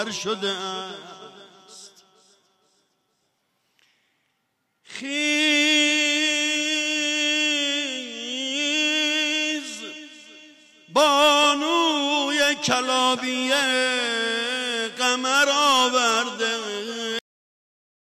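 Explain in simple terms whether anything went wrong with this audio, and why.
Something did go wrong, right at the end. This is a cut-off end. At about 17.19 s the sound stops in the middle of itself. It does not fade or trail away. It simply drops to total digital silence, which lasts for the final 0.89 s. This happens when the last chunks of audio never get saved or played out. The recording ends before the sound was finished.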